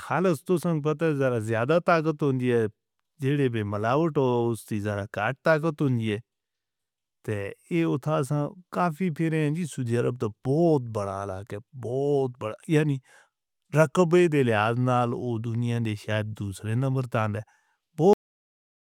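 At 18.13 s the speech stops abruptly in the middle of a sound and falls straight into digital silence, with no natural decay or room tail, for the remaining 0.85 s or so of the clip. This is a cut-off end: the final stretch of audio buffers was never written to the file or played out, so the recording ends where the data ran out rather than where the sound finished.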